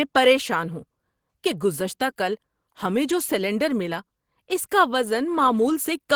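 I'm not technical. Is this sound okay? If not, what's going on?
Yes, this recording sounds fine, with nothing wrong to point to. There is no moment in it where a listener would notice a technical problem.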